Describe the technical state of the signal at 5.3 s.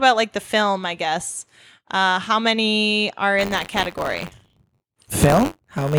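Buffer tearing runs from 3.38 s to the end. Writer and reader have slipped, splicing in audio about 30 ms old. This causes a robotic 93.8 Hz buzz, which fits a 512-sample buffer.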